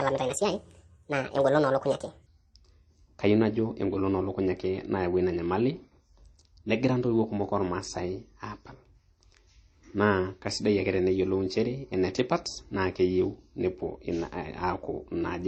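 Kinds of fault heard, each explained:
Transcoding between lossy codecs: The top end stops at a low cut-off, with layered smeary artefacts, likely from a low-rate MP3 re-encoded to something like HE-AAC.
Section at the wrong speed: From 0 to 2.26 s the speech runs 1.46 times fast and about seven semitones high, likely from playback against the wrong clock.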